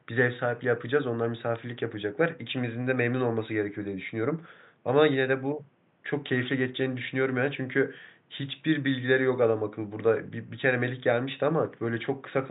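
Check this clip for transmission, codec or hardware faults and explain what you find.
No transmission, codec or hardware faults can be heard in this speech clip, and the only other sound is the room's own background noise, sitting about 39 dB below the speech as part of the recording itself.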